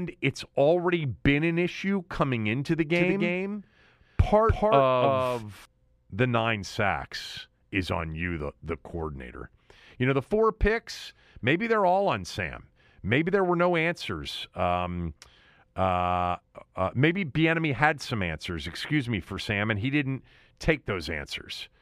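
From 2.95 s to 5.65 s the speech has a doubled audio track. A second full-band copy trails around 300 ms behind, roughly 5 dB quieter, with no decay or room colour. It starts and stops abruptly, likely from a second, slower capture path.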